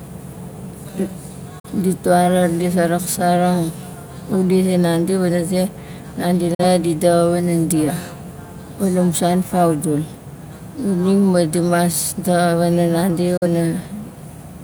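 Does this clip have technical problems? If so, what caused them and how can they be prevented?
Yes. Three times the speech drops abruptly into brief silence and then resumes: at 1.59 to 1.69 s, 6.54 to 6.65 s, and 13.37 to 13.46 s. Each gap starts with an 8 ms fade and loses about 43 ms of programme, which fits a single lost frame. This is digital broadcast dropout: the receiver lost the signal or rejected a corrupted frame and muted until valid frames returned. Stronger reception or a better antenna, with stronger error protection on the transmission, prevents it.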